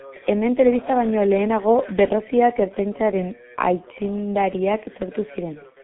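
From start to finish the speech sounds muffled and hoarse, with consonants smeared into one another and nothing bright above the telephone band, which runs from about 150 Hz to 3.4 kHz. This is heavy G.723.1 codec damage: the codec rebuilds the voice from a coarse model refreshed only every 30 ms, at a rate that fits roughly 6 kbit/s, so quick articulation blurs and the harmonic detail turns rough.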